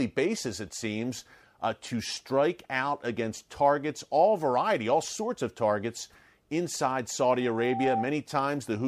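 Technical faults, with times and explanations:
7.4 to 8.13 s, loudspeaker feedback squeal: after "sorts of targets inside", a steady 778 Hz tone swells over roughly half a second to about speech level. The microphone picks up its own loudspeaker, and loop gain above one at that frequency makes the tone self-sustaining.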